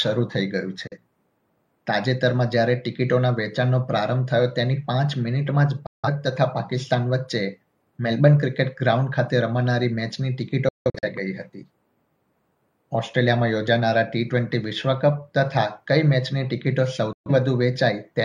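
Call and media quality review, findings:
Digital broadcast dropout at 0.87, 5.86–6.09, 10.69–11.08 and 17.13–17.31 s. The receiver mutes on missing or corrupt frames, with 3 ms fades. Gaps of 43, 171, 256 and 128 ms fit whole 43 ms frames. At 10.69 s the gap is scattered holes, longest 171 ms. The missing audio is lost.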